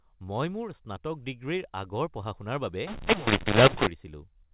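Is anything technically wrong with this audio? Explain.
Yes. From 2.87 to 3.87 s, the mu-law and A-law are mixed up: mu-law telephone codes are read as A-law, scrambling levels into harsh distortion and lifting silent gaps into hiss, unlike ordinary clipping.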